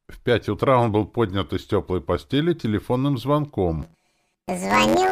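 The sound turns into a robotic buzz from 3.82 s to 5.12 s, a case of planar audio read as interleaved. Each 10.88 ms block stores all left samples then all right, but is played as alternating pairs, so every block runs twice at double speed. Because the blocks are short, the result is a buzz at about 92 Hz with no clear octave shift. A spectrogram shows vertical striations every 10.9 ms and a comb of 92 Hz harmonics, and the waveform repeats in half-block segments.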